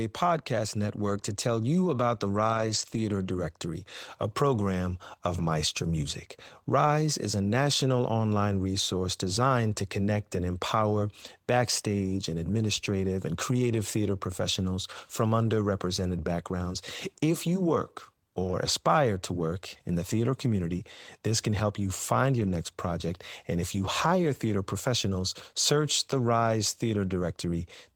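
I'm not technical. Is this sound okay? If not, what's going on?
No. The call lost small chunks of data, but each following chunk carried a rough backup copy, so this is a lost packet rebuilt from error correction. The speech never cuts out; it just turns briefly grainy and noisier at 2.53–2.99 s, 11.23–11.25 s after "to connect and empower", 18.43–18.53 s after "you work", and 22.39–22.53 s after "can help you find".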